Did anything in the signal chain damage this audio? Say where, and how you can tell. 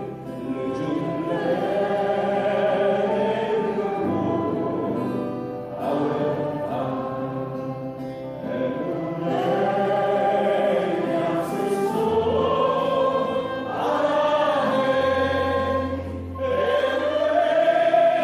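No, nothing in the signal chain can be heard damaging this audio. No stage, from wiring and conversion through to storage and playback, leaves a mark on what reaches the listener.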